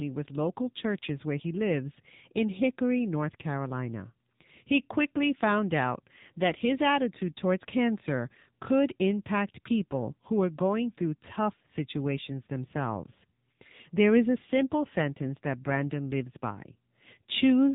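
From start to finish the speech has passed through the AMR narrowband mobile codec. Nothing above about 3.8 kHz survives, and the codec damage is heavy. The voice turns buzzy and synthetic, and vowels sound reconstructed from a vocal-tract model rather than carried through intact. That degree of damage fits a low AMR-NB mode near 6.7 kbps. A plain telephone-band filter would also remove the highs but leave what remains clean, so this codec roughness is what sets it apart.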